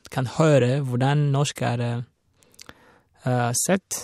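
Speech, with nothing technically wrong in it. There is no event to time and no cause to trace.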